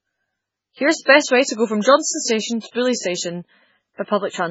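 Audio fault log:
Throughout, MP3 compression: the speech is heavily damaged and watery, with nothing above 7.6 kHz. This likely comes from a bit-starved encoder, fitting a bitrate near 16 kbps. Weak frequency lines flicker between frames, causing swirling, chirpy s sounds and smeared attacks.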